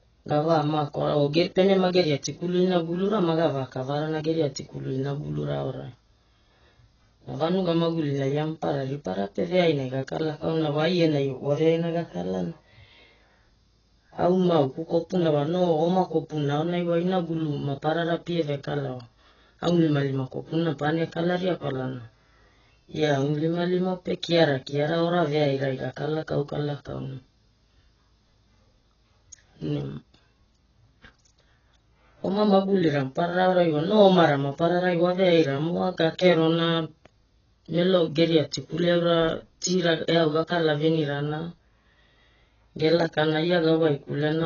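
Throughout, nothing sounds above 6.8 kHz. The speech is dull and smeared, with warbling, fizzy sibilants. This likely comes from heavy AAC compression, consistent with about 12 kbps.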